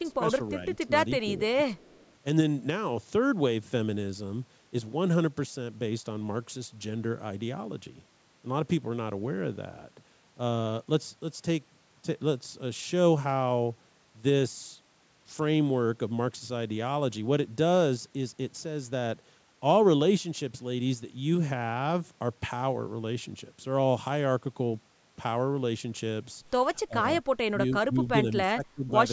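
The speech dips by about 10 dB in brief patches from 0.03 to 0.53 s, at 0.85 s and from 1.35 to 1.76 s. This is speech suppressed in double talk, likely because the echo canceller turned the talker down while the far side spoke over them. From 1.74 to 2.13 s a faint copy of the speech trails 316 ms behind, about 30 dB below it. This is an echo leak, likely loudspeaker pickup that one side's echo canceller failed to remove. The same suppression returns more deeply, about 20 dB, from 26.84 to 27.06 s and in chopped stretches between 27.5 and 28.95 s.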